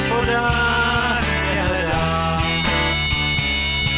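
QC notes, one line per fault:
No faults found on listening; nothing to log.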